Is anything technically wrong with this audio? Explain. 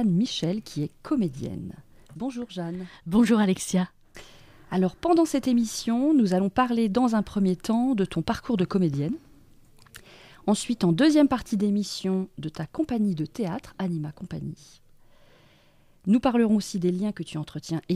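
No, nothing technically wrong stands out here; it all sounds just as it should.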